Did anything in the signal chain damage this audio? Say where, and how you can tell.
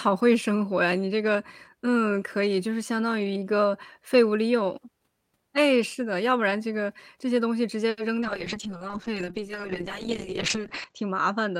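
Yes. A short stall from a late packet at 7.89 to 7.99 s: the network jitter buffer ran dry, so 80 ms of sound was held, then resumed with nothing lost.

Short concealed packet loss at 8.21 and 8.24 s: about 20 ms went missing each time, and the decoder patched it by extending the previous sound, leaving brief smears.

A call bitrate drop from 8.25 s to the end: the codec fell from 40 to 7 kbps, bandwidth shrank from 20 kHz to 8 kHz, and the audio turned muffled and coarse.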